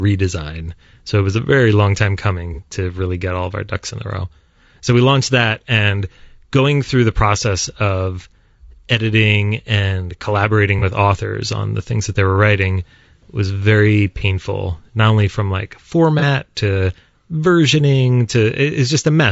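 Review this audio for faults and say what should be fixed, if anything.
The speech sounds rough and grainy throughout, with noise between harmonics. This is likely low-delay AAC compression; the damage fits a bitrate around 32 kbps. Raise the bitrate or use a codec mode with longer frames.

AAC frame loss with concealment occurs at 2.54, 10.79, 14.18 and 16.19 s. Each gap is about 30 ms, consistent with one lost frame. The decoder patches it from the previous spectrum, leaving a brief smeared, phasey blip. Add forward error correction or a jitter buffer to the transport.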